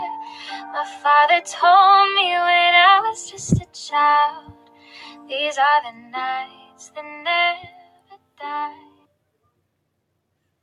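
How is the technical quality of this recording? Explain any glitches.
The technical quality is compromised by a speech-tuned noise suppressor that is working on audio it was never designed for.

Noise suppressor applied to music or sounds: across the whole clip, the processor treats sustained and ambient parts of the signal as noise and pulls them down, so the level swings by around 10 dB. Onsets pass while held portions and decays sag, giving a pumping, watery thinness. Unlike compressor pumping, the dips follow how steady the sound is, not how loud it is.

Sound cut by the noise suppressor: distinct dips occur at 0.24–0.42 s and 0.58–0.75 s (about 6 dB each), 4.38–5.31 s (about 11 dB, the longest), 5.93–6.14 s (about 7 dB), 6.47–6.96 s and 7.70–8.17 s (about 11 dB each). In each, the suppressor misreads a sustained or fading stretch as noise and attenuates it, so the tail sinks or is cut short. 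These are level sags rather than dropouts to silence, and sudden transients mostly come through.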